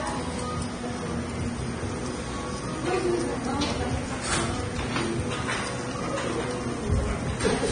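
Throughout, the sound is hissy and grainy, with nothing above 9.7 kHz and smeared attacks, likely heavy Vorbis compression at a low bitrate, around 24 kbps.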